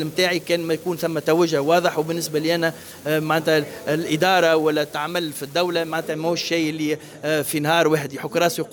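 An unreliable data bit runs from the start to 6.12 s. One marginal data line flips its bit in a random share of samples, each error a fixed spike of about -33 dBFS, heard as a steady crackle or fizz that ignores the level of the sound.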